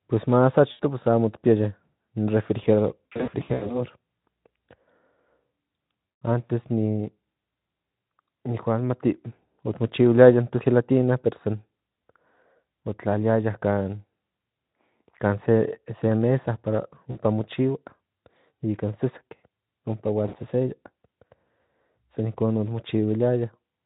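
Around 0.71 s there's a short dropout of about 80 ms, where the Speex decoder papers over missing packets. That's VoIP packet loss concealed by the speech codec. It repeats the last pitch and filter and fades the gain, so you get a brief buzzy or noisy smear. The worst patch runs 3.06 to 3.80 s, with 400 ms lost in bursts of up to 80 ms. Shorter ones follow at 6.05 to 6.21 s, 17.11 to 17.18 s, and 20.27 to 20.37 s, just after "ompa hual".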